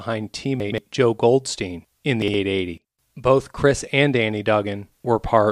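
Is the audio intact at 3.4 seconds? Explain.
Yes, the speech at 3.4 seconds plays through intact, with no dropout, click, distortion or other technical fault at that moment.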